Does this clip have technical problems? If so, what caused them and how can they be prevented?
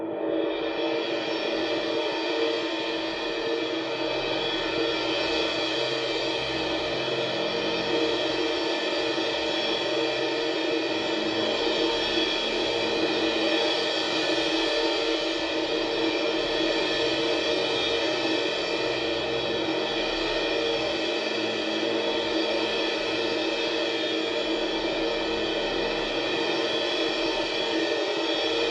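No, this music clip has no technical faults. Since nothing went wrong in the audio chain, there is nothing here to prevent.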